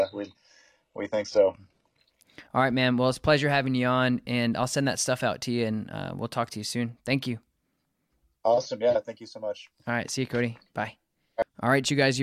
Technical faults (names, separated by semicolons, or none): adaptive stream starting at a low bitrate